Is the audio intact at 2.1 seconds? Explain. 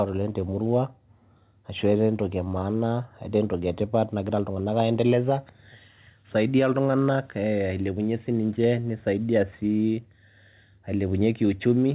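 Yes, the speech is intact at 2.1 seconds, with nothing there beyond the narrowband call sound of the G.711 A-law path, which carries nothing above 4 kHz.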